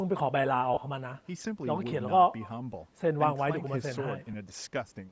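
From start to finish the speech carries an echo with no canceller: a faint copy of the talker returns roughly a fifth of a second after each phrase, about 26 dB below the direct sound, thinner, so the speech feels shadowed. Nothing cancels the loudspeaker sound leaking back into the far end's microphone. On a waveform, each burst of speech has a small ghost trailing it. On a spectrogram, faint duplicate harmonic patterns sit shifted right by that delay.

Throughout, the speech also has a breathy, grainy edge, plainly audible and most likely from Bluetooth LC3 compression. The grain is consistent with a low bitrate around 32 kbps and 10 ms frames. The codec drops much of the upper spectrum and fills the gaps with noise, so fine detail turns to hiss. On a spectrogram the high band looks blotchy and speckled rather than harmonic, in blocks about 10 ms wide. The call microphone processing leaves nothing above 8 kHz, so the spectrogram ends cleanly there.

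Lost LE Audio frames break the speech twice. From 0.74 to 0.77 s, about 30 ms is replaced, and the sound smears into a brief noisy blur before normal audio returns. Around 4.33 to 4.35 s a shorter loss of about 10 ms gives a quick rough flicker. The decoder repeats the last spectrum with scrambled phase. On a spectrogram, harmonics dissolve into a flat smudge for those instants, and the waveform loses its regular periodic shape.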